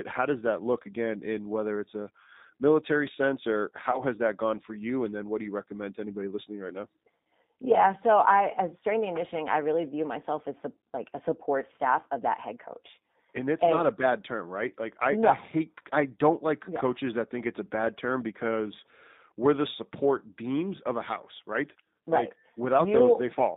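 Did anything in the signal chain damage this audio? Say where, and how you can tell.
Yes, the codec stage. The whole clip is band-limited to roughly 150 Hz to 3.7 kHz, with the rough, slightly synthetic texture of G.729 coding, which fits 8 kbit/s G.729A. It rebuilds speech from a vocal tract filter, pitch predictor and a few pulses per frame, so the damage is plainly audible.

On the network side there's VoIP packet loss concealed by the speech codec from about 3.91 to 4.02 s, right after "a military sense or" and before "has that gone for". The gap sounds like two lost 10 ms frames, about 20 ms. The decoder stretched its last pitch and filter state at falling gain, and since each frame builds on the previous one, the sound stays degraded for roughly 110 ms.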